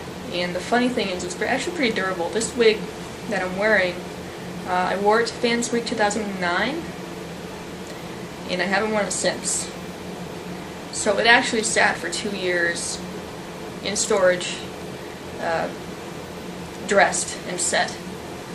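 No technical fault can be heard anywhere in the audio. There is nothing here that needs a time or a cause attached to it.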